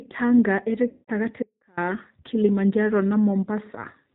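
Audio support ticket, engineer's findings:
Speech thin, rough and synthetic throughout, nothing above 4 kHz. Codec: G.729 (8 kbit/s). Mechanism: each 10 ms frame is rebuilt from a vocal tract filter, pitch predictor and a few pulses, so fine detail is plainly lost.

0.89 to 1.10 s: speech smears into a buzzy tone or coloured noise that fades, for about 190 ms, which fits 19 lost 10 ms frames. VoIP packet loss concealed by the speech codec. Decoder extrapolated last pitch and filter at falling gain, and recovery stays weak briefly after.

1.43 to 1.77 s: signal cuts out abruptly for about 346 ms, leaving only faint sound roughly 30 dB below normal level, then returns mid-flow. Audio dropout to a faint residue, likely a break upstream while the later path stayed live.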